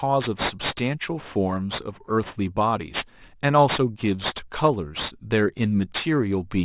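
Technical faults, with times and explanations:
Throughout, aliasing: the speech was dropped to a lower rate without filtering first, so content above 4 kHz folds back down as gritty, unrelated tones, fairly strong against the speech. Sibilants go metallic, and the fold point fits an 8 kHz rate.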